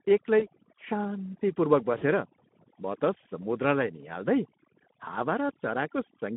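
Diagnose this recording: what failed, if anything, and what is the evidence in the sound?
Overdone noise removal runs throughout the clip. The background drops and breaks up into twinkling specks where isolated bands flicker on and off. This happens in call processing: a noise suppressor set too aggressively cuts any frequency band that sits close to its noise estimate. The quieter parts of the speech fall into that range, so they are removed along with the noise.

The Speex codec damage is plainly audible for the whole clip. The speech is hoarse and noisy, and the band runs only from about 150 Hz to 3.5 kHz, so it is narrowband with nothing above. This is codec-stage damage. The coarse, grainy texture fits a low-rate Speex setting of around 11 kbps. At that rate the CELP coder has few bits for the excitation signal, so the fine structure of the voice is replaced with rough noise.

VoIP packet loss concealed by the speech codec appears at 0.39 to 0.46 s and again at 1.98 to 2.05 s. 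Each time, the speech is stretched out and fades, and then sounds weak for a moment after it resumes. This is a network fault. The first gap fits about 20 ms of lost audio and the second about 40 ms. The decoder filled each gap by repeating its last pitch and filter at falling gain, and because its state carries over, the speech takes a while to recover.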